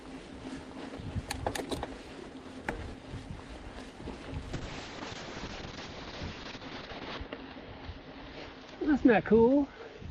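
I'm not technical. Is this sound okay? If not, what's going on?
No. From about 4.54 seconds to the end, there's a call bitrate drop. The connection seemed to get squeezed, so the call software sent the audio using far fewer bits. The sound turns rougher and watery, and it loses its crisp top end, with everything above roughly 8 kHz gone, so it comes across muffled. The worst stretch lasts about 2.65 seconds, and it never fully recovers before the clip ends.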